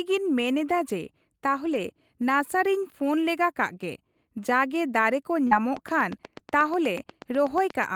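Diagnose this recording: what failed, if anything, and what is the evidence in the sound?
Network stage: lost packet rebuilt from error correction at 1.65–1.79 s and 5.51 s. There is no gap, but 80 ms and 20 ms of rougher, noisier sound, consistent with four lost packets and then one.

Network stage: short concealed packet loss at 5.47–5.53 s. About 40 ms is missing and smoothed over by extending the preceding sound, heard as a brief smear rather than rough texture.

Analogue wiring or interface: train of clicks from 5.77 s to the end. These are regular ticks at 8.2 per second, about 5 dB above the sound, continuing through pauses, likely from electrical interference.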